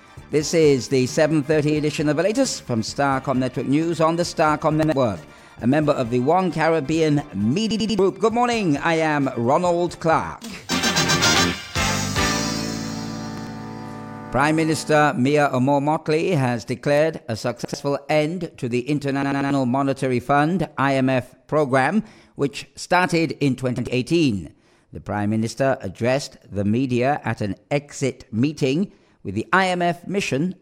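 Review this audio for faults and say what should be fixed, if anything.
Repeated buffer faults occur six times: at 4.83, 7.71, 13.38, 17.65, 19.23 and 23.78 s. Each time, new audio arrived late, so the last block played again with a hard join. Each repeated block lasts about 93 ms, which fits a 4096-sample buffer. Four events repeat once, losing roughly a tenth of a second. At 7.71 and 19.23 s the block plays three extra times, a stutter of about 0.28 s. Prevent this with a larger buffer or higher audio-thread priority.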